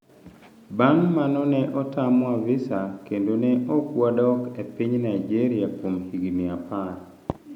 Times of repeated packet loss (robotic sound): none

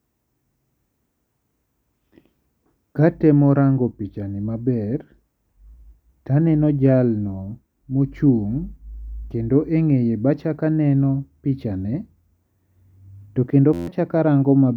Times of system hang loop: 13.73-13.87

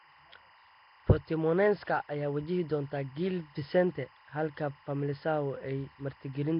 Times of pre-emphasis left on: none

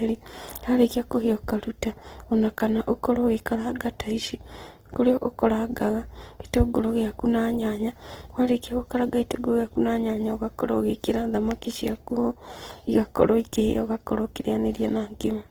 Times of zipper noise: none

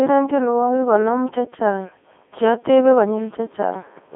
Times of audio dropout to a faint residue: none

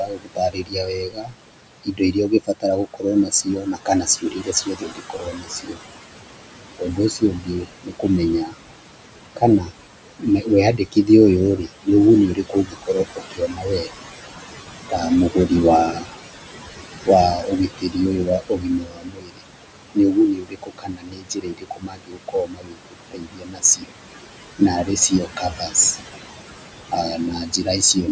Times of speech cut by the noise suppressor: 0.00-5.79, 6.79-8.55, 9.36-13.89, 14.90-16.08, 17.05-23.92, 24.59-25.97, 26.91-28.08

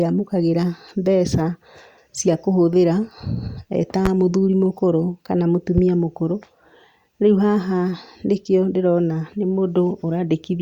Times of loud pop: 4.05-4.08, 5.78-5.81

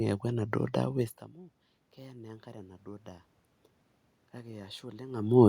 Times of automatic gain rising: 1.97-3.14

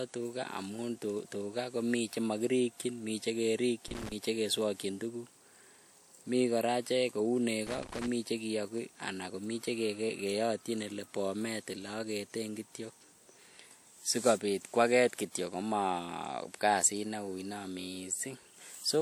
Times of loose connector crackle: 3.88-4.12, 7.67-8.07

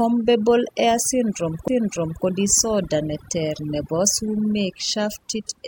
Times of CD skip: 1.68

